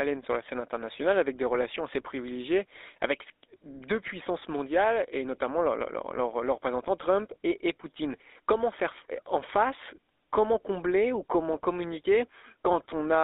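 From start to finish the speech carries GSM full-rate codec damage, and it is plainly audible. The codec models the vocal tract as a filter. It drives that filter with regularly spaced pulses and keeps only every third excitation sample. The result is a buzzy, gravelly roughness in the voice. The band runs from about 300 Hz to 3.7 kHz, which gives a thin, narrow telephone tone. The grit fits the 13 kbps full-rate coder.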